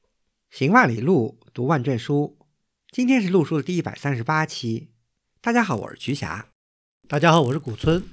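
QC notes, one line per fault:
5.7 to 8.13 s, resampler restarted on every block: from 5.7 s to the end, the speech picks up a rough 50 Hz buzz that follows the signal and drops out in the gaps. Each 20 ms block was resampled in isolation, so the converter's filter saw nothing useful past the block edges and left a small error at every boundary. At this block length those ticks run together into a buzz, which fits a 48 kHz to 16 kHz conversion being restarted per block.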